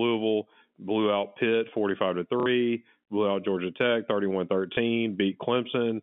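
At 2.40 s the sound briefly turns robotic for 60 ms, ending at 2.46 s, and a small blip follows at 4.74 to 4.77 s for 30 ms. Both are packet loss with the last packet repeated: the receiver replays the last audio it got, and the repeat ignores the pitch cycle. The lengths fit 30 ms packets. On a spectrogram, identical slices repeat inside the narrow 150 Hz to 3.5 kHz telephone band of the G.711 line.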